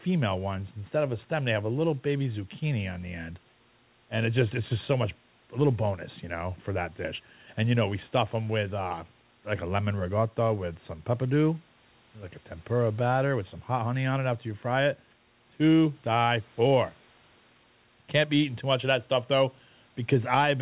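No technical faults can be heard in this speech recording. The call path leaves nothing above 4 kHz, which fits a G.711 mu-law codec, and room noise sits about 35 dB below the speech.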